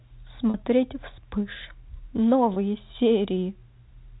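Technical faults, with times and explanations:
0.50 to 0.54 s and 2.54 to 2.56 s, packet loss with pitch repetition: gaps of about 40 ms and 20 ms, fitting two packets and one, are bridged by repeating the last pitch period, giving brief held, buzzy tones within the narrowband G.711 telephone speech.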